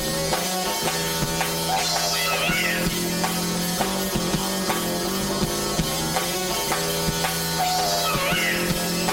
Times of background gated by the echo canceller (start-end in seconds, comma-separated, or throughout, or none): none